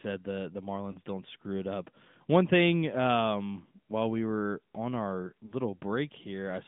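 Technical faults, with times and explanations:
Throughout: AMR narrowband mobile codec. The sound sits in a phone-line band of roughly 150 Hz to 3.6 kHz, with nothing on top. The clearly buzzy, synthetic edge of the pulse-driven vocal tract model suggests a mid-range mode around 10.2 kbps.
0.92–0.97 s and 5.46–5.54 s: lost AMR speech frames. The first gap fits a single missing 20 ms frame and the second about two. In each, the decoder replays its last good pitch and vocal tract settings at falling gain, giving a brief warbly dip before the speech recovers.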